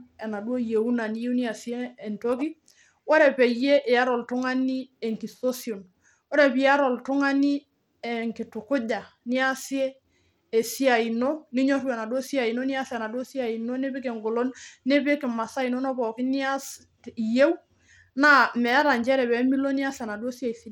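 From start to finish, the speech carries plainly audible codec damage, most likely from Bluetooth SBC compression. The treble is thin and unstable. High sibilance drops out and flickers back. A gritty, grainy noise clings to the sound, with aliasing in the upper range. The codec is starved of bits. Its upper sub-bands get little or nothing, and the rest are coarsely quantised. The damage fits a low rate around 96 kbps.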